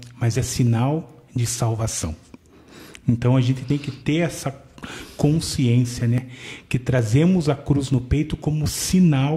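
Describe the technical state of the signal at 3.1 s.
At 3.1 s the signal is intact, with no dropout, distortion, glitch or other technical fault to be heard at that point.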